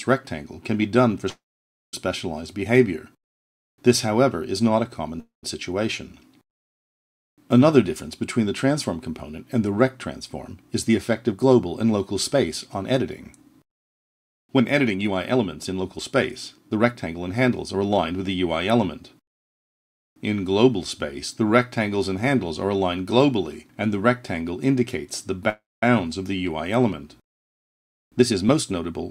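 At 1.29 to 1.94 s, 5.20 to 5.44 s and 25.49 to 25.83 s there's a call audio freeze, likely from delayed packets draining the jitter buffer. The last sound smears into a fading buzz, then silence, then resumes where it stopped with nothing lost. From 10.89 to 18.38 s, and again from 27.55 to 29.02 s, jitter buffer speed-up kicks in. The receiver trims tiny pitch-period slices to shed backlog, about a second in the first stretch and about 0.2 s in the second. The result runs at 112% and then 115% speed, sounding hurried but at the same pitch.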